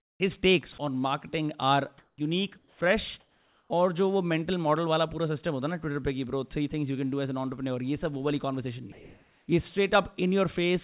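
A speech clip carried over a narrowband call path, with nothing above 4 kHz, which fits G.711 A-law at 64 kbps. Comfort noise replaces the background at 0.0 to 0.2 s, 1.98 to 2.18 s, 3.2 to 3.7 s (just before "और जो वो मेंटल") and 8.92 to 9.48 s (just after "सब वो वाली कॉन्वर्सेशन"). In those gaps the real room tone gives way to a flat, featureless hiss. It is quieter than the true background by about 15, 7, 4 and 2 dB in turn. The likely cause is discontinuous transmission: the sender goes quiet in pauses, and the receiver fills them with synthetic noise. Two onsets are clipped by the voice detector. At 0.14 s, 60 ms are missing before "takes on marketing are". At 2.11 to 2.18 s, 70 ms are missing. Both starts arrive abruptly, with no soft lead-in. The likely cause is a detector that was slow to notice the sound returning, so those first moments were never sent and noise played in their place. 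Sound is also dropped by the voice detector at 0.72 to 0.78 s, where about 30 ms vanish, and at 2.58 to 2.8 s, where about 100 ms vanish. Each time the sound briefly turns into steady noise or near silence. The likely cause is the detector taking the sound for background and stopping transmission.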